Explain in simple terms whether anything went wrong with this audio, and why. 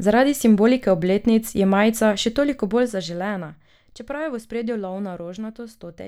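Something did go wrong, in one spot. From 2.48 to 3.7 seconds, just after "obletnic je majica še", the level of the speech drops noticeably. It drops in a staircase of small jumps, about ten a second, rather than in one smooth glide. Each jump leaves a tiny click. Together the clicks form a ticking, zipping sound on top of the speech. This fault is called zipper noise. It happens when a volume change is applied in coarse steps with no smoothing between them.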